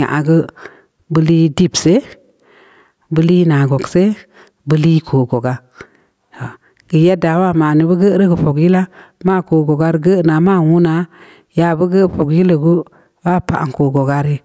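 Gain pumping runs throughout: the level is pulled down on each loud stretch of speech, swinging by around 10 dB, so loud and soft parts end up closer in level and the sound is squashed. The likely cause is gain set far too high, with a fast limiter pulling it down.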